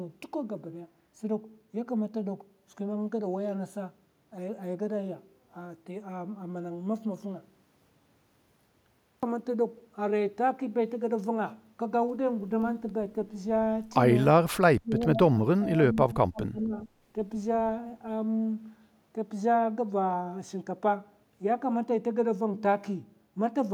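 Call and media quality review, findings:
Speech suppressed in double talk, 14.69–16.87 s. Near-end speech ducks, deepest roughly 20 dB, about 1.5 s affected in total. Likely the echo canceller attenuating both its own talker and the loudspeaker echo during overlapping talk. Level dips track the overlap, unlike packet-loss gaps or warbling.

Echo leak, 16.81–16.87 s. Brief delayed copy of speech, 403 ms behind the original and about 30 dB below it. Likely residual loudspeaker pickup passing the loudspeaker side's echo canceller. A discrete, late repeat rather than room reverberation's smooth decay.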